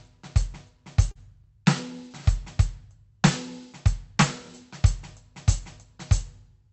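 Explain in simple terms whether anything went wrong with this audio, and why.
At about 1.11 to 1.18 s, the music briefly smears or wobbles. This is short concealed packet loss. About 40 ms of the sound never arrived in time. The receiver filled the gap by stretching out the sound just before it, then blended back in.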